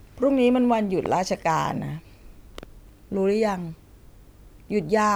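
Speech carrying two loud pops: a single sharp one from 1.06 to 1.08 s, well above the voice at roughly 10 dB, and a quieter double pop from 2.58 to 2.65 s. The speech continues underneath both. The likely cause is a sudden voltage pulse, such as static or a switching glitch.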